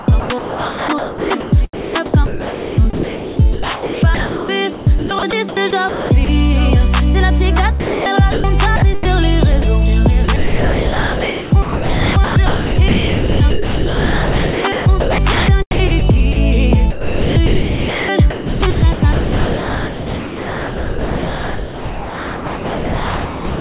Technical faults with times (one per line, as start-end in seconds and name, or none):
0.00-6.29 sound chopped by the voice detector
7.80-8.06 sound dropped by the voice detector
8.32-8.44 sound dropped by the voice detector
8.76-9.67 sound chopped by the voice detector
10.24-16.36 sound chopped by the voice detector
16.90-23.59 sound chopped by the voice detector